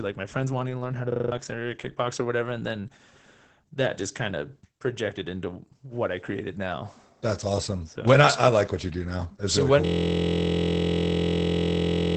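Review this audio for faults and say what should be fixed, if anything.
Opus voice compression runs through the whole clip. Nothing remains above about 8.8 kHz. The speech sounds muffled and slightly hoarse. That points to Opus in its SILK voice mode at around 12 kbps, with the excitation coded coarsely. Encode at a higher bitrate to prevent this.

A system hang loop occurs twice. From 1.12 to 1.32 s, a 40 ms piece repeats at 25 Hz, about five times, as a machine-gun stutter. Roughly a fifth of a second of audio is lost there. From 9.86 s to the end, a 23.22 ms piece loops at 43.1 Hz as a steady buzz. That fits a 1024-sample ring buffer. In both cases the host stalled while the hardware kept replaying its buffer. Fix the driver or system stall, and have playback mute when the buffer stops being refilled.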